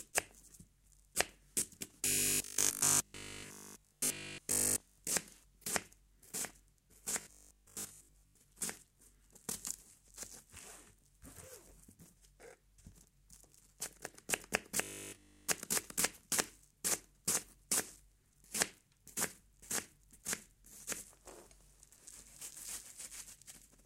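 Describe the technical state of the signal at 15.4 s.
At 15.4 s the audio is inside a stretch of robotic sound from repeated short buffers, running from 14.83 to 15.49 s. The sounds turn into a rigid, metallic 50 Hz buzz that only loosely follows their shape. This is likely caused by the last 20 ms being replayed continuously while fresh audio is skipped. Unlike mains hum, the buzz is not a steady tone added beneath the audio. The original sound is replaced by it.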